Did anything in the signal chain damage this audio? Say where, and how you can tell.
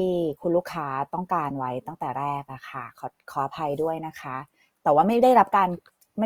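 Yes. The damage sits at the codec stage and runs throughout the speech. It sounds grainy, rough and noisy rather than swirly, yet the top end stays open. That points to Opus compression, likely in music mode near 24 kbps, with starved bands filled by noise.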